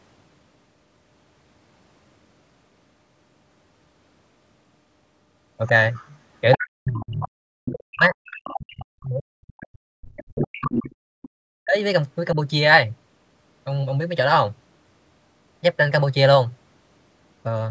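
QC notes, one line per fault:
5.66–6.62 s, 7.2–7.72 s, 8.26–8.6 s, 10.38–11.29 s, other side's voice leaking through: a second, separate voice sits under the main talker. It is strongest in the first stretch, only about 5 dB below the speech, and weaker later, about 15 dB down at 7.2 and 8.26 s and about 10 dB down from 10.38 s. The likely cause is loudspeaker playback reaching the microphone that the echo canceller did not fully remove. Unlike suppression, this adds sound rather than taking it away.
6.58–10.9 s and 11.47–11.77 s, speech suppressed in double talk: the main talker's own level collapses, by as much as about 40 dB, across roughly 4 s in the first span and briefly again for 0.3 s. This overlaps the leaked voice, so both sides were talking at once, and the canceller likely pulled the talker down along with the echo. Here the main voice thins or vanishes rather than a second voice appearing, all within a band that already stops at 8 kHz from the call's normal microphone processing.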